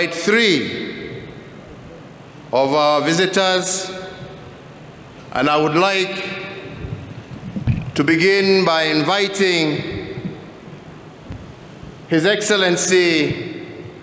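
Nothing stood out on listening to this recording.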